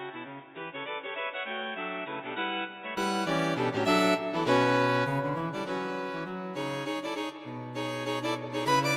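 From the start to about 2.97 s the sound is dull and boxy, with nothing above 3.8 kHz, noticeably quieter by roughly 10 dB, and carrying its own faint background noise well below the signal. At 2.97 s it opens up to full brightness and level with no gap. This points to an input switched to a poorer device, likely a narrower-band microphone or a headset call profile, before the better input took over.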